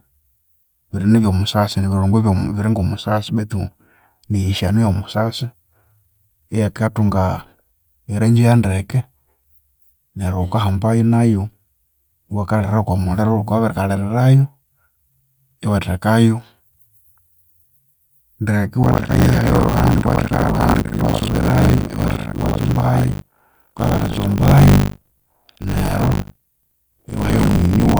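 In this speech recording, the software filling the playback ring buffer and the hardware draining it fall out of step from 18.82 s to the end, a buffer tearing fault. Each 20 ms period then splices in a stretch, a bit under half, of audio from roughly 70 ms earlier, with hard joins on either side. The result is a 50 Hz robotic buzz that rides on the speech and drops away in the pauses.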